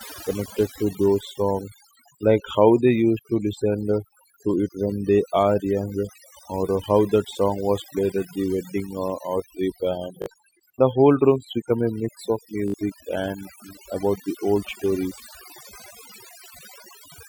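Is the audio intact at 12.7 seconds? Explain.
No. A repeated buffer runs from 12.68 to 12.74 s. New audio did not reach the output in time, so the playback device kept replaying the last short chunk it held. The stutter's rhythm fits a 20 ms buffer, with the same slice sounding three more times and a hard join at each repeat. The result is a quick buzzing stutter instead of continuous speech, and about 70 ms of the real audio is lost.

Overdone noise removal also affects this moment, as it does the whole clip. The noise reducer was set so aggressively that it pulls individual frequency bands down or out whenever they sit close to its noise estimate, and it removes the quieter parts of the speech along with the noise. Around 12.7 s, as elsewhere, the background drops and breaks up into twinkling specks.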